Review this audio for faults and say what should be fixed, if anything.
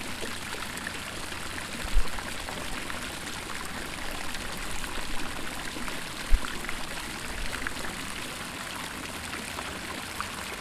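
A train of clicks runs from 2.15 to 10.23 s: around forty similar pops, about 4.6 per second at an irregular pace, peaking roughly 10 dB above the sound. Unlike crackle, the clicks share one shape and persist through pauses, likely from nearby equipment interference or a faulty connection or power supply. Move cables away from interfering devices and check the audio interface's connection and load.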